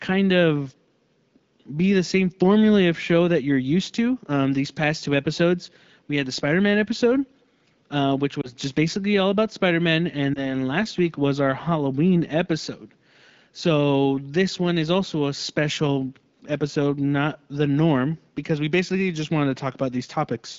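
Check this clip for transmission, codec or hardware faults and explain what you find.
Two short dropouts from lost AMR speech frames, heard through what sounds like AMR wideband coding near 12.65 kbit/s. At 8.42 to 8.53 s and 10.34 to 10.41 s, the decoder concealed a failed frame, each fitting one 20 ms loss, by repeating the previous pitch and vocal tract settings at lower gain. Each is heard as a brief dip or warble.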